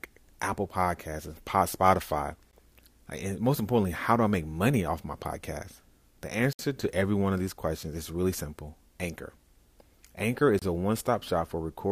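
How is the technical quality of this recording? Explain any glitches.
The speech has three short dropouts from gaps between stream segments: one at 2.51 s, one from 6.53 to 6.59 s just before "to every one of", and one from 10.59 to 10.62 s. They land every 4 s, at each segment boundary, where timestamps leave a small hole (16, 61 and 27 ms) that the player fills with silence. Each one is a hard-edged blank in the sound, with nothing actually lost.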